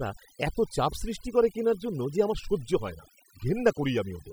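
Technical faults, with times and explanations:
Throughout, overdone noise removal: the background drops to near silence dotted with twinkling specks. A noise reducer set too aggressively is pulling individual frequency bands down or out wherever they sit close to the noise, taking quiet speech detail with them.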